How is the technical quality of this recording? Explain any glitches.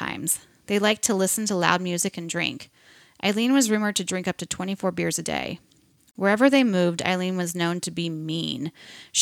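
The recording has one clear glitch in the speech. At 6.11 to 6.15 s there is a gap at a join of encoded pieces: a silence of about 41 ms. Separately encoded segments were spliced without trimming each encoder's leading delay and final-frame padding. The speech stops abruptly and then resumes where it left off. A waveform would show a flat dropout with slightly smeared edges, and a spectrogram would show a thin vertical blank band across all frequencies.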